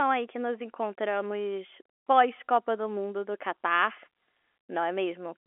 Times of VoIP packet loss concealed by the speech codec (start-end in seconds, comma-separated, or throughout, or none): none